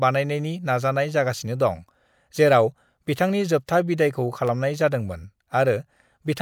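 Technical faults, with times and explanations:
4.01–4.48 s, CD scratch ticks: right after "दं जेराव बिथांनि जोबथा", three short ticks, the longest about a millisecond, roughly four per second. A surface blemish corrupts more data than the error correction can rebuild, once per disc revolution. The player then conceals the damaged samples by interpolating or muting them. Each patched spot breaks the waveform's continuity, which is heard as a click, and the spacing follows the rotation period.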